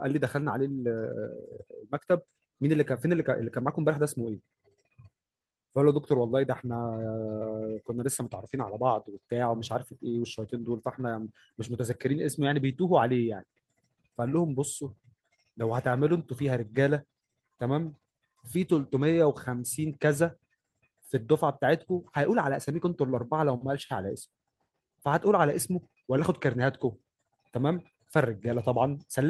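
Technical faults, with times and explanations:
No technical faults are present in this recording.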